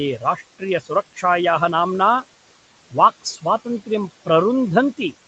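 Noise suppressor artifacts run through the whole recording. The suppressor judges, frame by frame, which frequency bands hold steady room noise and pulls them down by about 18 dB. The background therefore sinks in the gaps and comes back up beneath the speech. That pumping, tied to the speech, is what separates it from the room noise itself, which sits steadily about 19 dB under the voice. All of this sits within a band that stops at 8 kHz, as expected from the Opus call path.

Speech cut by the noise suppressor follows between 0.19 and 0.41 s. The suppressor mistook some quiet speech energy for noise and turned it down along with the background, by about 8 dB at worst. In total the affected portions come to about a tenth of a second. Soft sounds there come across as swallowed or faint. Unlike a plain level dip or a dropout, the louder parts of the speech stay intact while only the weak components thin out.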